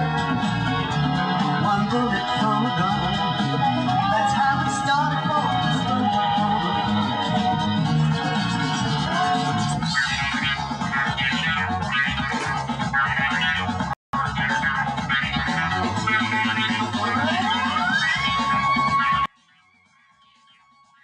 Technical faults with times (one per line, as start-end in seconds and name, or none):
13.93-14.13 rebuffering stall
19.26-21.04 one channel inverted